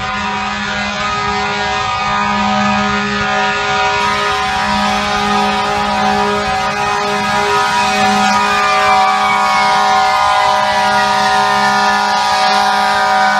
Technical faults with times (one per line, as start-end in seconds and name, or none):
0.00-4.00 adaptive stream starting at a low bitrate